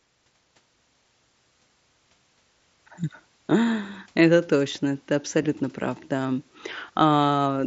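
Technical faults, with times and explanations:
5.43 s, concealed Bluetooth headset packet loss between "точно ты" and "прав да": 15 ms of audio went missing and was refilled by copying a closely matching recent waveform stretch, leaving a brief buzzy tone with a small warble where real audio returns.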